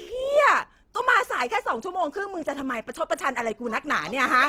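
From start to finish the speech carries plainly audible Opus compression damage, likely from an encoder starved of bits, which fits a rate around 16 kbps in its CELT music mode. Instead of dropping bands, the codec keeps each band's energy and fills the detail with folded or noise content, so the bandwidth stays full but the sound turns rough, grainy and hissy. That texture, rather than the watery swirl of MP3, tells it apart.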